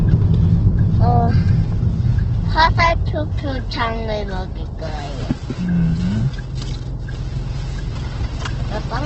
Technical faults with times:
0.00-9.05 Opus compression

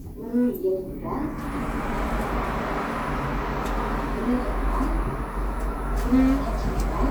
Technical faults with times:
none

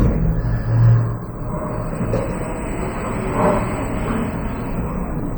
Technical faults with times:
0.00-5.38 MP3 compression

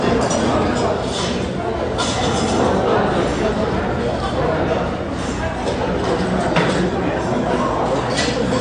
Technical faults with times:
0.00-8.61 MP3 compression

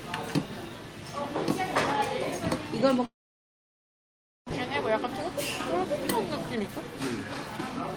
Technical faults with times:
3.05-4.53 long network dropout
6.54-7.93 jitter buffer speed-up

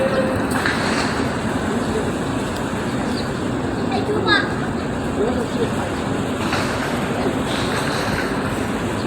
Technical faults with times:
none

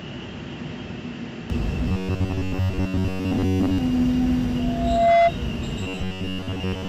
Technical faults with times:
0.00-1.50 input switched to a poorer device
1.88-3.78 robotic sound from repeated short buffers
4.58-5.32 loudspeaker feedback squeal
5.81-6.88 robotic sound from repeated short buffers

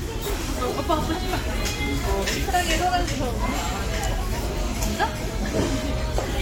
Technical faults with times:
none

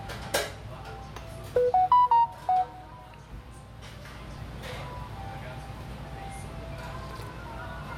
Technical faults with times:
4.37 dropped buffer (overrun)
5.81 dropped buffer (overrun)

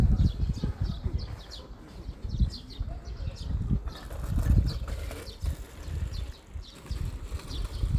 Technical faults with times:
none

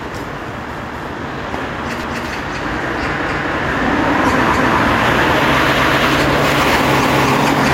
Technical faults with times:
0.00-7.73 gain pumping
0.79-1.04 overlapping chunks
2.04-2.29 overlapping chunks
3.29-3.54 overlapping chunks
4.54-4.79 overlapping chunks
7.04-7.29 overlapping chunks

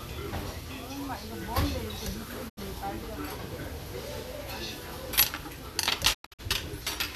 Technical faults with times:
2.48-2.59 digital broadcast dropout
6.13-6.41 digital broadcast dropout

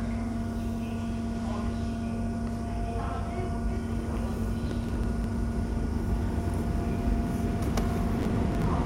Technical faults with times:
4.66-5.24 processor overload crackle
8.19-8.64 processor overload crackle

